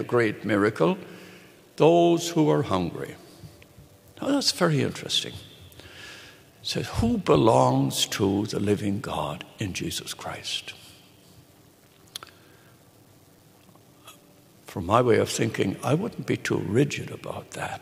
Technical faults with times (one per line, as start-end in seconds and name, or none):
1.34-16.53 clock drift buffer slips